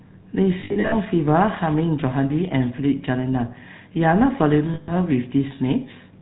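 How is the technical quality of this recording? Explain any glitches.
The speech sounds buzzy and gravelly from start to finish, with two short stretches where it turns into a rough metallic ring.

Throughout the clip, the damage comes from the GSM full-rate codec, which fits a 13 kbps coding. The voice has a hard, grainy roughness with nothing above 4 kHz, so it sounds dull and narrow. The codec rebuilds speech from a simple model of the vocal tract, driven by sparse, regularly spaced pulses that keep only a fraction of the original excitation, and that thinning is what makes the voice buzz.

From 0.6 to 0.95 s, and again from 4.74 to 4.92 s, there are lost GSM frames. In the first stretch the voice stutters into a metallic, ringing hold, with about 220 ms of sound replaced across those 320 ms in scattered gaps, the longest around 70 ms. In the second, about 140 ms is replaced. Where frames are missing, the decoder repeats the last good frame's settings at a falling level, which holds the sound as a fading ring instead of leaving silence.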